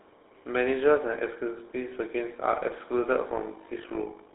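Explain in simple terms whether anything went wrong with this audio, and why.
The whole clip has gone through the GSM full-rate codec, the old mobile-phone voice coder. It rebuilds speech from a simple model of the throat driven by sparse pulses, so the voice sounds buzzy and gravelly, and nothing above about 3.8 kHz survives. That gives it a narrow, phone-line sound. Plain band-limiting alone would only sound muffled. The grainy, rasping texture is what marks this as codec damage.

From 3.28 s to the end there is also overlap-add ripple. The sound was chopped into overlapping slices and stitched back together with mismatched overlaps, so the loudness dips and swells with every slice, roughly fifty times a second. You hear a fast, robotic flutter on top of the speech. Unlike the codec's steady roughness, it starts suddenly at that point and pulses evenly.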